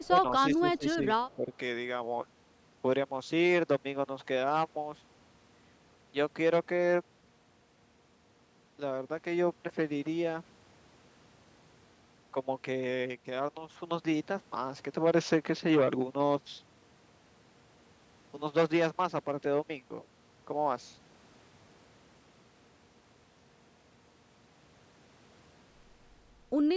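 Speech, with two echo-related faults concentrated in the first second and a half. An echo leak appears at 0.03 to 0.07 s and again at 1.3 to 1.36 s: a faint copy of the voice played on the loudspeaker side returns about 193 ms late, sitting around 35 dB below the speech. The likely cause is a loudspeaker on one side whose echo canceller let a residue of its own microphone pickup through and sent it back. Speech suppressed in double talk follows each time both sides overlap: a slight dip at 0.1 to 0.16 s, a deeper attenuation of around 15 dB across roughly 0.4 s between 0.55 and 1.04 s, and a drop of about 10 dB from 1.36 to 1.53 s. The talker's level sags in those spans, most likely because the echo canceller could not tell the near-end voice from its loudspeaker echo and ducked both together. The band-limiting to 8 kHz comes from the call's normal microphone processing.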